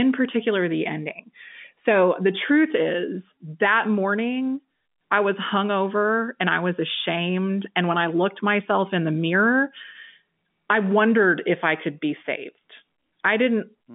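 No technical faults are audible.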